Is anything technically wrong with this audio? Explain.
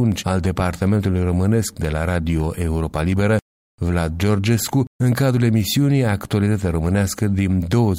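Yes. From 0.12 s to 7.62 s there is a regular tick about every 0.75 s, roughly ten in all. These are clock drift buffer slips, likely caused by two devices running on separate clocks that disagree by around 500 ppm, so the buffer between them drifts until a small block of about 15 samples is dropped or repeated. On a spectrogram each slip shows as a thin, evenly spaced vertical broadband line. On the waveform it appears as a small step or discontinuity.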